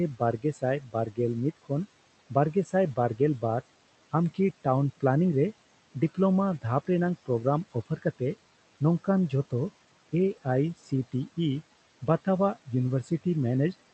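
Noise suppressor artifacts run through the whole clip: the suppressor pulls the steady room noise down by about 16 dB frame by frame, so the noise sinks between the words and rises under them. Speech cut by the noise suppressor occurs at 0.38–0.63, 0.80–1.18, 7.73–8.21, 10.78–10.92 and 13.03–13.25 s, where quiet speech is mistaken for noise and dropped by about 11 to 15 dB, so it sounds swallowed.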